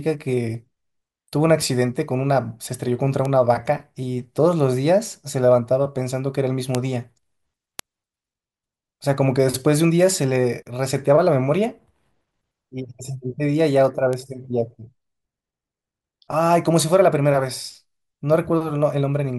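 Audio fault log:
3.25, 6.75, 7.79, 10.89, 14.13 s: bit error spikes. A flipped bit, in memory or on a digital link, throws one sample or two far off by a power of two before the signal snaps back, producing a sharp broadband tick unrelated to the speech, peaking at about -13 to -1 dBFS.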